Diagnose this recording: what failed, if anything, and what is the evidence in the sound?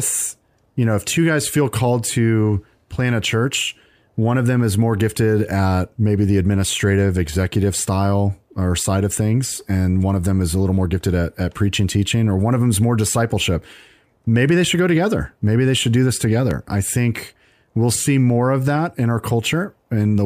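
A single loud pop lands at 16.51 to 16.54 s, peaking roughly 10 dB above the speech, which carries on unbroken underneath. The stage is likely analogue wiring. A voltage step from a plug, switch or static discharge, shaped by the following circuitry, produces one sharp transient.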